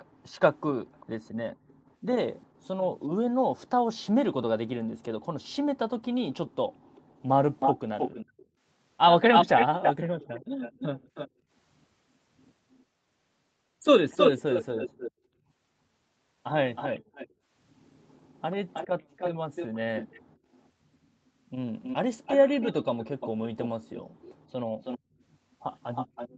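Right from the start, up to about 2.46 s, there's a faint delayed copy of the speech trailing roughly 0.4 s behind, sitting way down, maybe around 30 dB under the talker. That's an echo leak, likely from the far end playing the call on a loudspeaker, with its echo canceller letting some of the mic pickup slip back to us. Overlapping that, from 0.05 to 2.65 s, the room sound gets clamped, dipping by as much as about 40 dB for a few hundred milliseconds in total. That's background gated by the echo canceller: it turns the mic down hard while the speaker plays, then lets go.

From 6.46 s to the end, the echo returns much stronger, trailing by about 0.32 s and only around 5 dB below the speech, so it's easy to hear as a second copy. The gating repeats three more times: 6.69 to 11.5 s, with drops up to about 26 dB over roughly half a second in total, then 17.0 to 20.36 s and 24.02 to 25.21 s, both dipping as far as about 40 dB for a few hundred milliseconds each. 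Nothing reaches above 8 kHz, which fits a wideband Opus call path.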